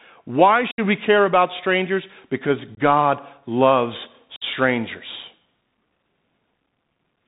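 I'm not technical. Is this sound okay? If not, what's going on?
No. The Bluetooth CVSD headset codec affects the whole recording. This is the simple phone-style codec used by Bluetooth headsets. It tracks the speech as a rapid series of tiny up-or-down steps and drops everything high-pitched. Here that leaves the voice muffled, with scratchy s sounds and a grainy hiss underneath.

There is also unconcealed Bluetooth headset packet loss at 0.71–0.80 s, 2.75–2.79 s and 4.36–4.43 s. Small chunks of audio failed to arrive from the headset, roughly ten at the first moment, a few at the second and several at the third. Nothing covered the gaps, so each one is an abrupt hole in the speech.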